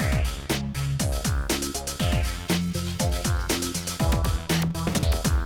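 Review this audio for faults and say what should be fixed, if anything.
Frames out of order between 4.93 and 5.03 s: two neighbouring blocks of about 46.4 ms, which fits two codec frames each, were swapped, so the sound briefly flutters. A waveform shows abrupt discontinuities there, and a spectrogram shows vertical broadband lines. Fix it with sequence-numbered packets and a reordering jitter buffer before decoding.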